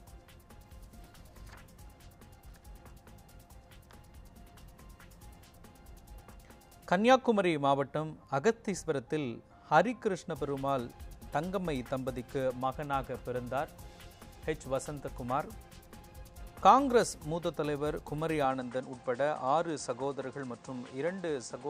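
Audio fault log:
18.45–21.69 s, input switched to a poorer device: the top end suddenly ends at 9.3 kHz, with no gap and no noticeable level jump, and a new background noise appears about 35 dB below the signal. A likely mid-recording move to a narrower-band microphone explains this.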